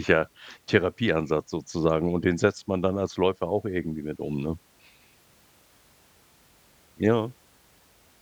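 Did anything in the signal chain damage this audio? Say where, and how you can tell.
No, nothing along the way from capture to playback seems to have harmed this speech; there's simply nothing in it that points to trouble at any stage.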